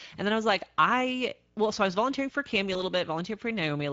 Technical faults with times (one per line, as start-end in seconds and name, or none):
0.00-3.92 Speex codec
2.73-2.81 VoIP packet loss concealed by the speech codec